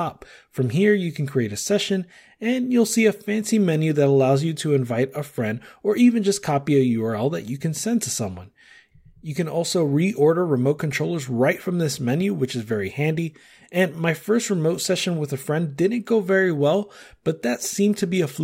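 Nothing in the speech stood out as a technical problem on listening.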